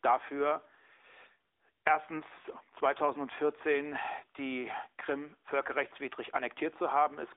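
Throughout, the speech carries AMR narrowband mobile codec damage: nothing above 3.7 kHz, a thin 300 Hz to 3.6 kHz band, and a buzzy, synthetic edge from vocal-tract modelling at around 10.2 kbps, unlike plain band-limiting.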